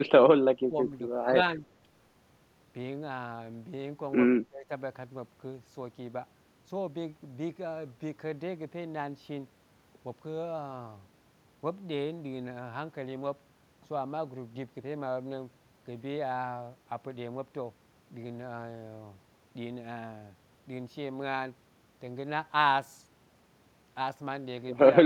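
Between 0.35 and 4.70 s the speech sinks four times: deeply at 0.35–0.46 s, moderately at 0.68–0.76 s, slightly at 1.57–1.64 s, and deeply again over about a third of a second at 4.37–4.70 s. This is likely speech suppressed in double talk, with the echo canceller ducking the near talker while the far side spoke. Each dip shows as a pinched waveform envelope and a faded band across the spectrogram.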